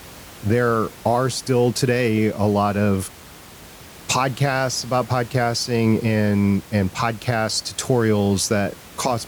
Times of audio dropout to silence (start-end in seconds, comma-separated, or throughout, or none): none